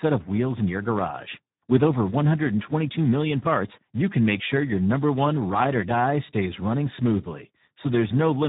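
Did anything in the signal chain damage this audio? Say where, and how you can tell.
Yes. The damage sits at the codec stage, and it runs through the whole speech clip. This is Speex codec compression at a heavily degraded setting. The speech sounds hoarse and noisy, edging toward a robotic buzz. Almost nothing is left above 3.9 kHz. The roughness points to a rate near 8 kbps. At that rate the CELP coder has too few bits to model the excitation. Its crude stand-in pulse train replaces natural voicing.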